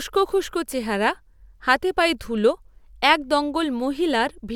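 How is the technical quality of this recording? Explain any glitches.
No audible glitches or faults.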